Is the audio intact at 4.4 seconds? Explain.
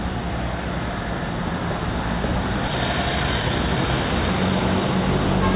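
No. At 4.4 seconds the jitter buffer speed-up is in progress, running from 2.67 to 5.37 seconds: holding too much audio, the receiver repeatedly trimmed short slices of one or a few pitch periods, about half a second in all. The sound plays at 117% speed, hurried but unchanged in pitch.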